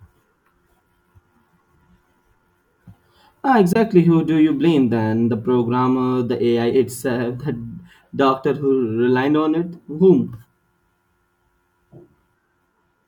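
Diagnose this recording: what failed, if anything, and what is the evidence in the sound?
Playback link: a flat gap at 3.73–3.76 s, a full-band blank stripe on the spectrogram, speech resuming as if uninterrupted. Likely a Bluetooth dropout, fitting one lost packet.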